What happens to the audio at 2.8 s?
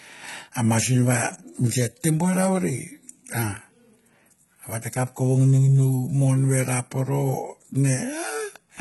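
At 2.8 s, as across the whole clip, the speech carries heavy HE-AAC compression damage, likely from a very low bitrate near 16 kbps. Unlike a plain low-pass cut, the treble extends up to 11.8 kHz, but it is rebuilt from lower bands, so sibilants sound gritty and metallic.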